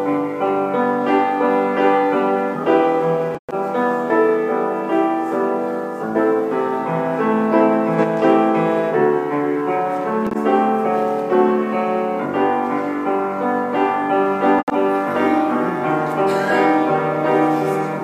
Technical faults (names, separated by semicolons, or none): corrupt frame concealed; corrupt frame decoded